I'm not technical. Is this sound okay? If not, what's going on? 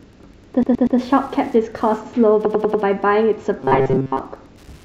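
No, this speech clip has three kinds of problem.

Wi-Fi interference runs through the whole clip as a faint, steady ticking, about ten ticks a second. A nearby Wi-Fi radio sends a short signal every 102.4 ms, and the audio circuit picks it up and turns it into sound. It sits well below the voice.

Repeated frames occur twice, from 0.63 to 0.99 s and from 2.45 to 2.83 s. In the first, a 120 ms slice of audio plays three extra times. In the second, a 96 ms slice plays four extra times. It sounds like a stutter. Pieces of the recording were stored or sent more than once, so the clip runs about 0.36 s and 0.38 s longer than it should.

Robotic sound from repeated short buffers affects 3.59 to 4.19 s. The voice turns into a stiff, metallic buzz at 133 Hz that only roughly follows the speech. The likely cause is new audio arriving too slowly. The software fills the gaps by looping a tiny scrap, which fits a buffer about 7.5 ms long, and most of the real sound in that stretch is skipped.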